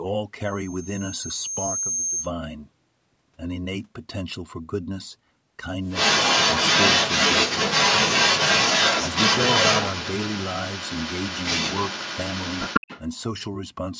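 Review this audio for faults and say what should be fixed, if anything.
A loudspeaker feedback squeal runs from 0.45 to 2.32 s. A microphone is picking up the loudspeaker it feeds. At 6.4 kHz the loop gain passes one, so that tone feeds on itself. It swells over about a second and a half. It ends roughly 5 dB above the speech. To prevent it, lower the loudspeaker gain, move the microphone away from the speaker, or notch out the ringing frequency.

An echo leak runs from 5.88 to 13.01 s. A second copy of the speech trails the original by 156 ms. That copy is strong, roughly 5 dB louder than the direct speech. The likely cause is a far end playing the call on a loudspeaker whose echo canceller let part of its microphone pickup through. That residue comes back as a delayed repeat. To prevent it, have the far end use a headset or fix its echo cancellation.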